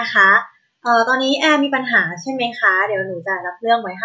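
Nothing goes wrong anywhere in this bit of speech, so there's no fault to point to at any moment.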